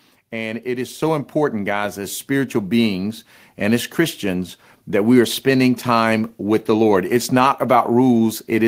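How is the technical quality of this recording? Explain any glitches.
The recording has one clear glitch: a microphone volume step-up at 1.02 s. At that instant the whole signal jumps by about 5 dB, and the speech and the background noise rise together rather than the voice alone getting louder. That is the signature of an automatic gain adjustment. The calling software judged the input too quiet and raised the microphone's input volume in a single step instead of ramping it. The level then stays at the new, higher setting.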